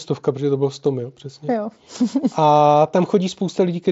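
No technical faults can be heard in this speech recording.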